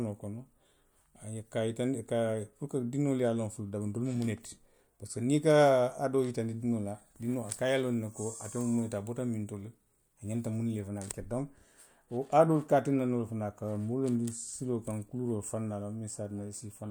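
No technical faults are audible anywhere in the recording.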